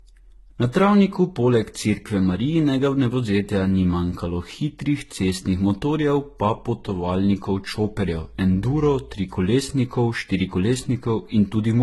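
Across the whole clip the speech carries two layers of coding damage, likely from transcoding between lossy codecs: a very low-rate HE-AAC encode, consistent with about 16 kbit/s, followed by a Vorbis pass near 43 kbit/s. The Vorbis stage re-encodes the artefacts left by the first codec and adds its own on top. Nothing is present above 11.8 kHz, giving a dull, band-limited top end.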